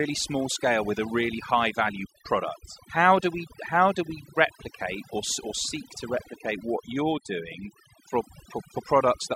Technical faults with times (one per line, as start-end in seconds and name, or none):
0.00-9.36 overdone noise removal